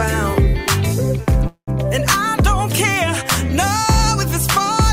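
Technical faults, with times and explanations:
1.47 to 1.70 s, call audio freeze: the sound hangs on its last moment as a buzzy, fading hiss that sinks into about 0.1 s of silence, then resumes where it stopped with nothing skipped, now running about 0.2 s late. This is likely a stall in packet delivery that let the jitter buffer run dry. The receiver stretched the final fragment to cover the wait, inserting roughly 200 ms of filler rather than dropping any audio.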